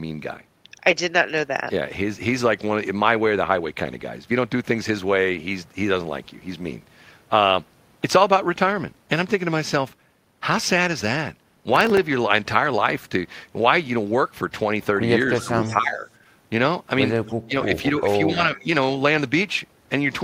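At 11.76 to 11.98 s there's a short burst of processor overload crackle, a gritty tearing riding on the speech. The processor is falling behind on very short buffers, a millisecond or two each. Around seven deadlines get missed back to back, and each miss replays a sliver of old audio with hard edges. Those stacked discontinuities are what you hear as the crackle, and it clears as soon as the load drops.

Around 15.38 to 15.42 s and again at 15.60 to 15.66 s you get brief echo leak: a faint copy of the speech about 20 dB down, trailing the original by 269 ms. There's another at 17.26 to 17.34 s, quieter, about 30 dB down, with the same 269 ms lag. That steady delay points to a far-end loudspeaker whose echo canceller likely let some of its own playback slip back into the send path.

Overlapping those leaks, the speech gets ducked. This is speech suppressed in double talk, likely the canceller clamping down while both sides talk at once because it can't tell its talker from the echo. 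From 15.43 to 16.07 s the level dips by about 10 dB. The deepest cut comes at 17.45 to 17.83 s, about 25 dB. Lighter dips follow at 18.02 to 18.08 s, about 5 dB, and at 18.32 to 18.68 s, about 10 dB, so the speech sounds pulled back there.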